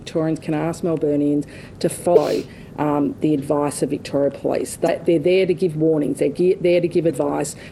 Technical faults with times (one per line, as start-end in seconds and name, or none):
2.13-2.18 damaged data in a compressed stream
4.85-4.89 damaged data in a compressed stream
7.07-7.11 damaged data in a compressed stream